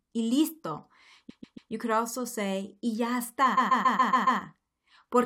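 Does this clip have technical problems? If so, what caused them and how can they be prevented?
Yes. The speech stutters, jumping back to replay the same 0.14 s fragment: repeated frames, from 1.29 to 1.71 s (three extra plays, just before "could also say y") and from 3.57 to 4.40 s (six extra plays, just after "also say y ya"). A run of compressed frames was written or sent more than once, consistent with a block of about six frames. This adds 0.42 s and 0.84 s to the clip. Checking frame sequence numbers and discarding duplicates before decoding prevents it.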